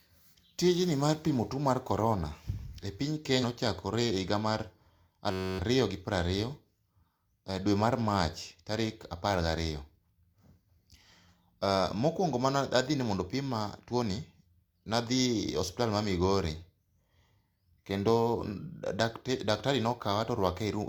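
Compressed frames skipped at 3.39 to 3.45 s, just after "e piny": missing or rejected frames make the speech jump ahead about a tenth of a second.

A system hang loop follows from 5.31 to 5.59 s, before "ariyo gi piero": a 10.67 ms slice, which fits a 512-sample buffer, repeats 26 times as a 93.8 Hz buzz, replacing roughly 0.3 s of speech.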